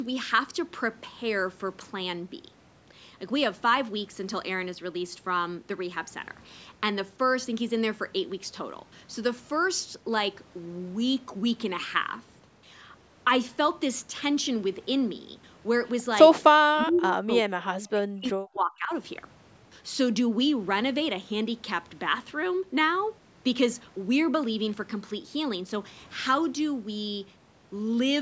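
From 16.63 to 18.92 s the speech sinks sharply, at its deepest by roughly 40 dB, so that about two seconds of it is pushed far down or broken into pieces. This is speech suppressed in double talk. Both ends were likely talking at once, and the echo canceller, unable to tell this talker apart from the returning loudspeaker sound, attenuated everything passing through it, including the wanted speech.

Inside that stretch, from 16.95 to 16.99 s, a brief, faint scrap of delayed speech slips through, roughly 30 dB below the main speech and arriving 377 ms late. This is an echo leak. The far side was probably playing the call over a loudspeaker, and its echo canceller failed to remove all of the sound its microphone caught, so a short fragment was sent back down the line.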